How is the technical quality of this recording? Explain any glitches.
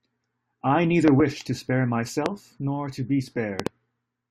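Three loud pops break into the speech, and the speech carries on underneath each one. Loud pop, at 1.08 to 1.22 s (a double pop), 2.26 to 2.28 s (single) and 3.60 to 3.69 s (double): each is likely a voltage step or spike from a plug, switch, static discharge or driver glitch, added to the signal and shaped by the following circuitry. Each is heard as a sharp thump standing roughly 20 dB above the speech, with the doubled ones arriving in quick succession.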